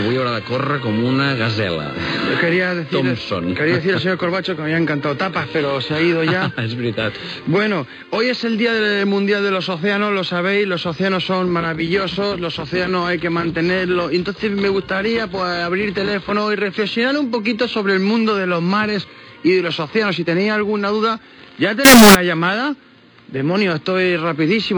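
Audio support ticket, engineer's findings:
Float read as integer, 21.85–22.15 s (0.3 s). Sudden burst, very loud and harsh, waveform near square at a high, nearly fixed level; background noise jumps to the level of the main sound, pitch still traceable. Likely cause: 32-bit float samples interpreted as 32-bit integer, so sign and exponent bits dominate each value. Check format negotiation or buffer handoff at that point.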